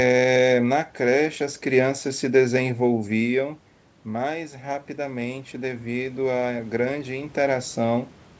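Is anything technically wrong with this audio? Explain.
Yes. There is one fault: the automatic gain rising. From 2.03 s to 8.15 s the speech and the room noise swell together. Around 3 s the talker seems to move back, and the input drops by about 12 dB. The gain control hears this as too quiet. It raises its gain slowly, by about 10 dB over roughly six seconds. So the level creeps upward, and the background rises with the speech.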